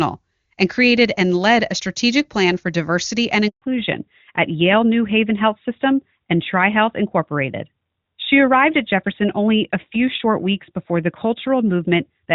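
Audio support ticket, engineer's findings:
Handover gap at 3.48 s. Audio cuts out quickly and stays silent for 140 ms, to 3.62 s. Probable component: the network handover. No speech frames came through during the switch, so that stretch is simply gone.

Fallback to narrowband from 3.62 s to the end. Clear HD Voice before the gap, consistent with AMR-WB around 23.85 kbit/s. After the gap, nothing above 4 kHz, and the sound is duller and rougher. Probable component: the codec dropping to AMR-NB, likely at 12.2 kbit/s.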